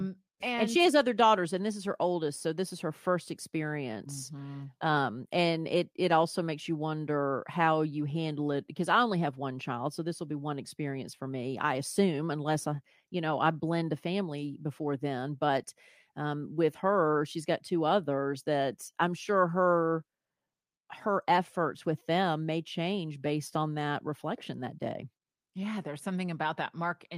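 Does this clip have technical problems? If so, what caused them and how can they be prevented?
No, there are no technical faults to report in this recording, so there is nothing to trace or prevent.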